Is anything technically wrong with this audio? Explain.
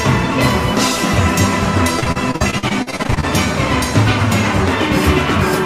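Yes. From 1.99 s to 3.24 s there is repeated packet loss, giving a robotic, choppy sound. Sixteen short gaps, the longest 47 ms, are each patched by extending the preceding sound, so about a third of that stretch is synthetic fill. The rapid succession of patched holes separates it from a single dropout.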